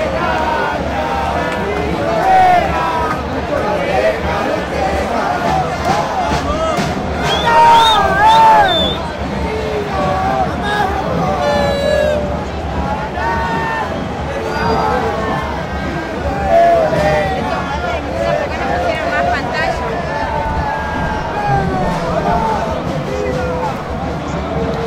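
Listening through the recording of everyday sounds, nothing stood out as a technical problem at any point.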